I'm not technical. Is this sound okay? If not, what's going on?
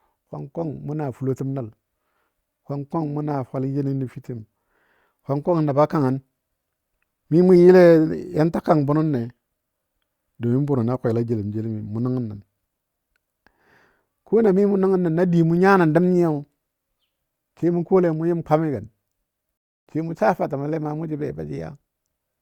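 No. At 19.57 s the speech stops dead for about 0.29 s, then carries on at 19.87 s from exactly where it left off. This is a rebuffering stall: playback ran out of downloaded audio and waited. Unlike a dropout, nothing is missing. The pause only adds time.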